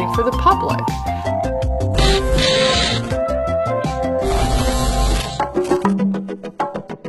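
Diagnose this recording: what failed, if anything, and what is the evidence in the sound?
Network stage: adaptive stream at a lower bitrate. From 1.24 s to the end, quality drops suddenly without a gap. Codec artefacts rise and nothing remains above 11.8 kHz.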